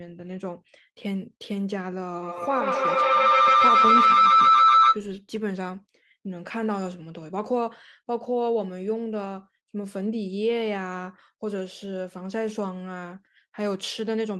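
A speech recording with a feedback howl from 2.22 to 5.08 s, peaking about 10 dB above the speech near 1.5 kHz and pulsing roughly every 150 ms. Two devices sharing a room re-amplify each other until the tone dominates. Spectrograms show a bright, throbbing horizontal band.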